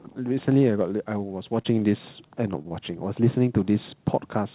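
At 1.62 to 1.66 s, 2.28 to 2.32 s and 2.62 to 2.66 s the speech shows short concealed packet loss: each time about 20 ms of audio failed to arrive, and the receiver bridged the gap with roughly 20 ms of invented sound carried on from what came before, then crossfaded back. Each is heard as a brief smear or wobble, and whatever was in that 20 ms is gone rather than delayed. Right after, at 2.68 to 2.73 s, comes a short stall from a late packet. Nothing is lost here. The jitter buffer ran dry, so the last sound was stretched by about 23 ms until the data turned up, and playback resumed from the same point. It sounds like a sound held a little too long, perhaps with a slight buzz, and everything after it is pushed later by that 23 ms. That lengthening is what sets it apart from the three losses. All of this sits inside narrowband telephone audio with nothing above 4 kHz, which fits a 64 kbps G.711 A-law call.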